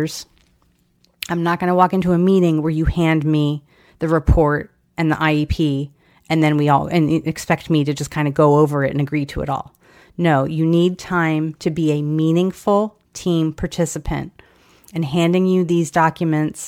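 No technical faults are audible in this recording.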